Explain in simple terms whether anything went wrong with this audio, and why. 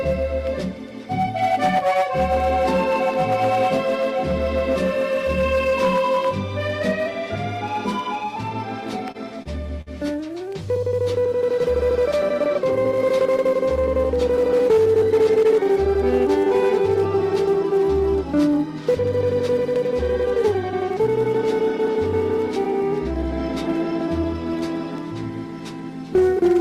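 Three short stalls from a late packet occur at 9.11, 9.42 and 9.81 s. Each time a packet arrived late, the receiver's jitter buffer ran dry and it held the last sound for 30, 30 and then 51 ms until the packet came. Nothing is lost, but the sound briefly hangs.

A jitter buffer speed-up runs from 25.49 to 25.83 s. The buffer had built up extra delay, so the receiver trimmed tiny slices, about 40 ms in total. The audio plays at 108% speed, hurried, at the same pitch.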